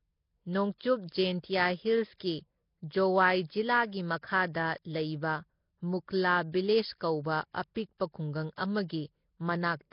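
A speech recording with a rough, hissy, underwater quality throughout, most likely Nellymoser compression at a low bitrate around 22 kbps; a spectrogram shows nothing above 5.3 kHz and noise-filled gaps between bands. Pre-echo appears at 0.78 to 0.80 s, a 23 ms spread, and at 2.19 s, about 15 ms, where block-wide quantisation noise smears short hiss ahead of sharp attacks, visible on the waveform as low fuzz before each onset.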